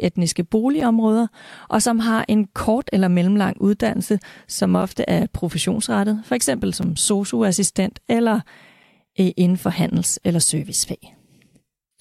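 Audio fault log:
2.81 s, 4.82 s, 6.83 s: gap between chunks. Speech stops for about 7 ms at each join, every 2.0 s. Unlike a dropout, no speech is lost; it resumes intact after each hole, suggesting silence was inserted between chunks.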